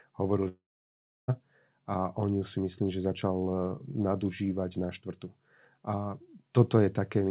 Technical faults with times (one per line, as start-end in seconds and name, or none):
0.48-1.31 long network dropout